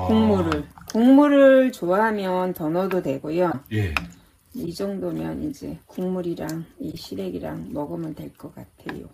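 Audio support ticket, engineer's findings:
Corrupt frame decoded, three events: 3.51–3.55 s, 4.66–4.68 s, 6.90–6.94 s. Bit errors in compressed frames, decoder played them unchecked. Misread gains and codes put energy at wrong frequencies, giving short chirp/blip bursts, around −15 to −20 dBFS. Last event spans several frames.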